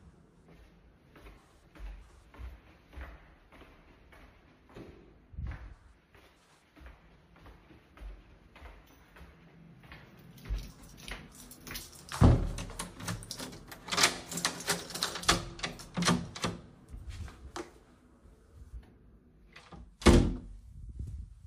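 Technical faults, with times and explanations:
9.60–9.68 s, repeated frames: a block of about 43 ms, which points to a single compressed frame, plays two extra times, so the sound stutters briefly and the clip runs about 85 ms longer. On a waveform, the same short shape appears three times in a row. On a spectrogram, an identical narrow slice is tiled side by side.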